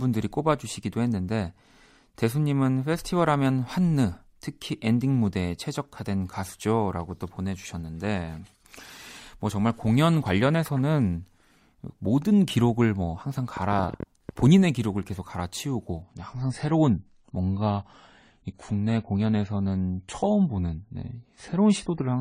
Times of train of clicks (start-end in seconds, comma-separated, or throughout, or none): 13.57-14.47